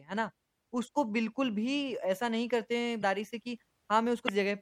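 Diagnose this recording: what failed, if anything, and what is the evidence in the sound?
The codec stage is the main culprit here. The whole clip has plainly audible MP3 compression: s sounds go swirly and watery, and consonant onsets smear. That's the encoder running short of bits, dropping the top end and switching weak frequency lines on and off between frames. The amount of damage fits a low bitrate, something like 64 kbps, so a starved MP3 encode is the likely cause.

There are also two short glitches that point to damaged data in the compressed stream, at 2.99 to 3.03 s and at 4.25 to 4.29 s, each about 40 ms long. That fits the decoder hitting corrupted or missing bytes, misreading or discarding those frames, losing sync, and then locking back on at the next frame header. The fault sits in storage or transport of the encoded file, not in the encode itself.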